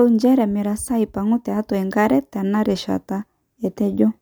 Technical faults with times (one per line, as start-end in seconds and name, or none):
none